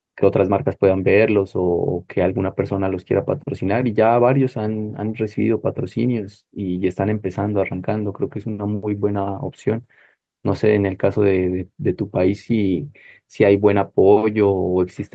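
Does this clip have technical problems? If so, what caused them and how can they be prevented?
No, no technical faults here.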